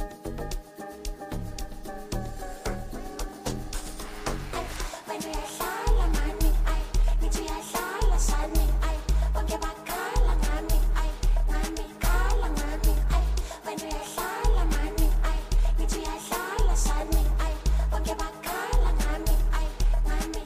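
No technical faults can be heard anywhere in the audio. Nothing interrupts or degrades it at any point.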